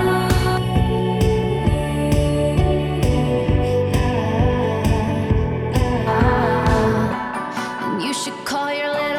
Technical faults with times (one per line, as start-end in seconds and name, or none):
0.57-6.07 channel delay (comb filtering)